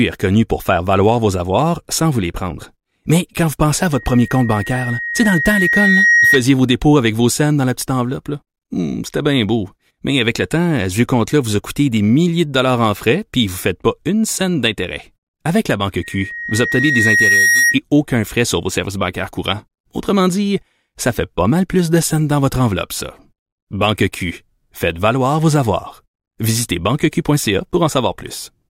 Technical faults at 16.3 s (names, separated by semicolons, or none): loudspeaker feedback squeal